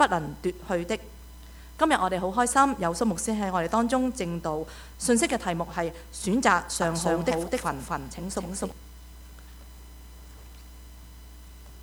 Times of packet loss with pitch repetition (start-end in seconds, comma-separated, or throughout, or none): none